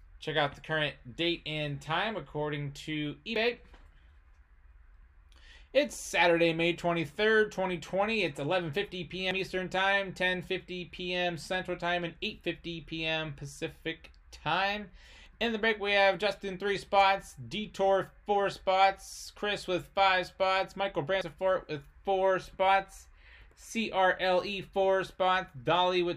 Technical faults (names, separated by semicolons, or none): audio missing between chunks